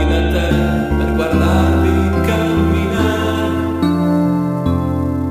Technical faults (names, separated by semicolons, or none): sample clock jitter